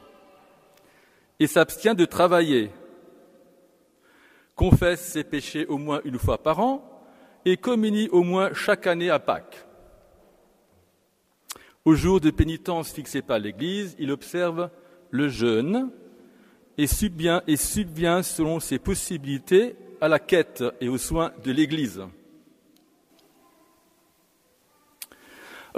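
Nothing stood out as a technical problem anywhere in the recording on listening.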